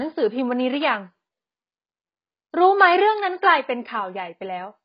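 Speech with AAC compression damage from start to finish: nothing above 5.1 kHz, a dull, smeared tone and a warbling, fizzy texture on sibilants. A spectrogram shows a hard ceiling at 5.1 kHz, likely from AAC-LC at a bitrate as low as 16 kbps.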